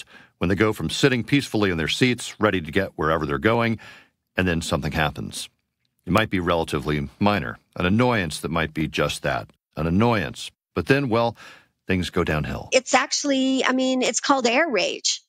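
Two independently clocked devices likely disagree by several hundred parts per million, so their shared buffer drifts and slips a few dozen samples each time. These clock drift buffer slips recur every 0.88 s from 0.92 to 14.94 s, about fifteen regular clicks through the speech.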